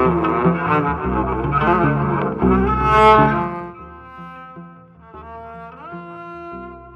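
From 3.24 to 3.72 s there is zipper noise. The level falls by roughly 20 dB over this span, but the gain moves in discrete 1 dB steps rather than along a smooth curve. The steps come at roughly fifty per second, and each abrupt gain change puts a small click into the waveform. Together they form a rapid ticking, zipping texture laid over the sound while the fade is in progress.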